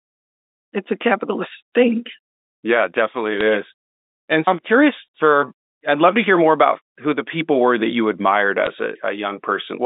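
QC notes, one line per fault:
3.38–3.41 s and 8.65 s (just after "were that you admired"), bit errors on a digital phone line: sparse flipped bits, around 0.15 percent, corrupt single mu-law samples, so sign or high-bit hits jump sharply and give brief ticks of crackle.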